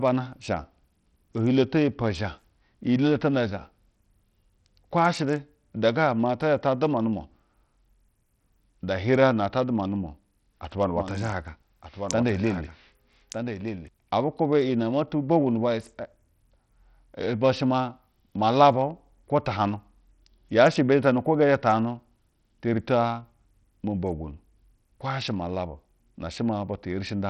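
From start to finish, the speech carries heavy damage that points to Bluetooth SBC compression as the likely cause. Nothing is left above 16.9 kHz. The upper bands flicker and thin out. A gritty, aliased noise rides on the speech, which fits a low bit pool near 64 kbps.

From 10.97 s to 13.89 s, right after "atuba nu", a doubled audio track appears. A second copy of the speech trails about a second behind, roughly 10 dB quieter. It is full-band and dry, with no room colour. It switches on and off abruptly, likely from two out-of-step copies in an edit.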